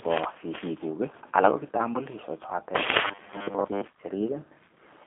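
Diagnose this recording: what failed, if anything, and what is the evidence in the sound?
The codec stage has failed in quality terms: the whole recording carries the G.729 codec's rough, slightly synthetic texture, with a narrow line band of about 250 Hz to 3.4 kHz. Unlike simple band-limiting, the speech is rebuilt from a few pulses per 10 ms frame at 8 kbit/s, so it sounds coarse, not merely dull.

From 3.06 to 3.85 s there is robotic sound from repeated short buffers, likely a driver or buffer stage that starves and loops the last fragment, skipping most of the real audio. The rigid 100 Hz buzz points to a 10 ms repeat. Unlike codec roughness, this pitch stays fixed regardless of the speech.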